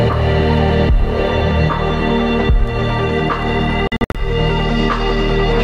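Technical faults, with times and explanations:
3.87–4.18 s, Bluetooth dropout: The sound breaks up into several short silent gaps over about 270 ms. The longest single gap lasts 61 ms. Together the gaps remove about 180 ms of audio. After each gap the sound resumes further along, as if it had kept playing. This points to a dozen or so packets likely arriving at the headphones too late to play and being dropped.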